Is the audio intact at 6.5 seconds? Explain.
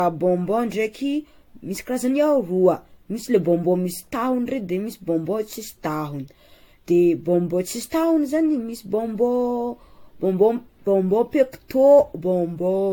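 No. At 6.5 seconds the speech carries generation loss, as it does through the whole clip. The sound is swirly, smeared and hollow, and onsets are blurred. Nothing is present above 18.6 kHz. The likely cause is repeated lossy re-encoding, around seven passes, which fits AAC-LC at roughly 96 kbit/s. Each pass quantises again on a shifted frame grid. Noise and spectral holes build up beyond what one encode at that rate would produce.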